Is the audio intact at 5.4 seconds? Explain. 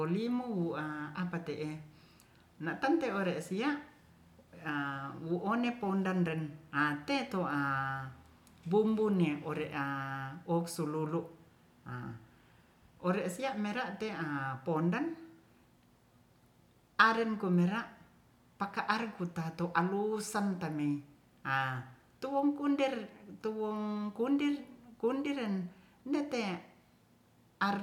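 Yes, the speech at 5.4 seconds plays through intact, with no audible dropout, glitch or distortion at that moment.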